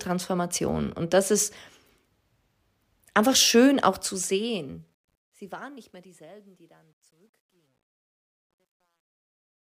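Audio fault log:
3.85–9.61 s, truncation distortion on a fade: after "einfach schön" the fade-out turns gritty, worst from 5.71 s, which fits an undithered 11-bit stage.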